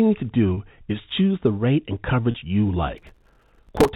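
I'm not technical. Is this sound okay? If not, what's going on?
No. There are two kinds of trouble in this speech.

At 0.54 s and again at 2.31 s, a small piece of the call, about 30 ms, went missing. This is packet loss with pitch repetition: the receiving end filled each gap by repeating the last bit of voice tone. Because the gaps are so short, you hear a brief held, slightly buzzy sound rather than a click or silence. Each is a single smooth patch, then the speech carries on.

From 2.98 s to 3.89 s there is processor overload crackle. The device playing the sound was too busy to keep up, and it missed roughly 150 of its tiny deadlines again and again, each covering only about a thousandth and a half of a second. Each miss replays a sliver of old audio with a hard edge. Unlike the smooth held tone of the lost packets, this is a dense, gritty tearing that lasts almost a second and stops when the overload ends.

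The narrow, phone-like tone throughout comes from G.711 telephone coding, the standard format for ordinary phone lines.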